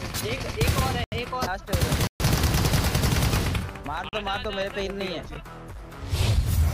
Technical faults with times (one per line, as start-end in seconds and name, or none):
1.04-1.12 block of digital silence
2.07-2.20 block of digital silence
4.09-4.13 block of digital silence